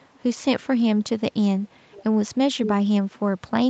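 At 0.0–0.2 s, 1.91–2.04 s and 2.63–2.74 s an echo leak returns speech 494 ms late, likely from an incompletely cancelled speakerphone, rising from about -35 to -5 dB; spectrograms show time-shifted duplicate harmonics.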